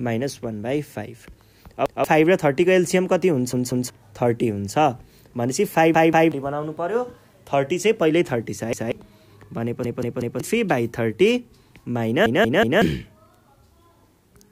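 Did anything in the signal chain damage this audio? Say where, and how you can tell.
Yes, a repeated buffer fault at the driver or buffer stage. Stutters occur at 1.86–2.04, 3.53–3.90, 5.94–6.32, 8.73–8.92, 9.85–10.40 and 12.26–12.82 s. In each, a block of about 186 ms plays again with a hard join, which fits an 8192-sample buffer. It repeats once in the first and fourth, twice in the second and third, and three times in the last two. New audio arrived late, so the device replayed the old block. Up to about half a second of audio is lost each time.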